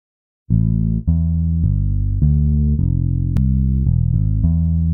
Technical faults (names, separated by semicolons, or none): compressed frames skipped